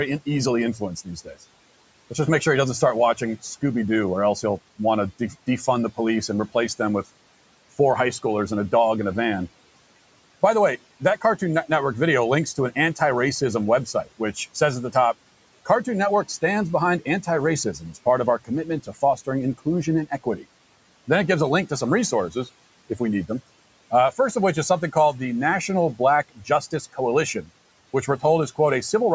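The noise suppressor mistook parts of the speech for background noise and turned them down. From 0.26 to 6.8 s, ending before "with four high schoolers", about half a second in total is cut. Further cuts fall at 10.42 to 11.42 s, from 12.56 to 20.45 s after "video links", at 21.69 to 22.99 s, and from 23.91 to 28.59 s after "we need them". The drops reach about 16 dB, leaving brief stretches of speech faint or swallowed.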